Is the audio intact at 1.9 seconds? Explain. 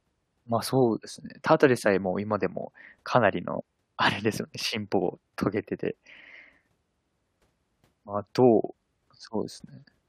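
Yes, the speech at 1.9 seconds plays through intact, with no dropout, click, distortion or other audible fault at that moment.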